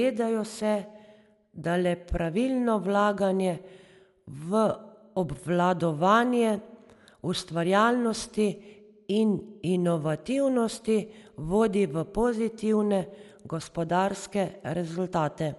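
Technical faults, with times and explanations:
Throughout, Dolby Digital compression, likely the cause: the speech sounds dull, with nothing above 11.5 kHz, and a rough, fluttering noise clings around tonal parts. Unlike MP3 swirl, this is dither noise filling starved frequency lines, which fits a bitrate near 64 kbps.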